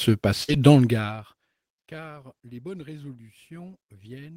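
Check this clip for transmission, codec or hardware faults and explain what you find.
Two transmission faults sit close together near the start of the speech.

A burst of packet loss runs from 0.43 to 0.50 s. Packets arrived too late or not at all. The receiver extended the last sound for about 48 ms while fading it, giving a brief held buzz or hiss. Then about 40 ms of speech is simply skipped.

Lost packets rebuilt from error correction follow, from 0.48 to 0.54 s. The next packets carried low-bitrate backup copies, so about 40 ms plays without a gap, which fits two rebuilt packets. Those frames sound rougher and noisier than the surrounding speech.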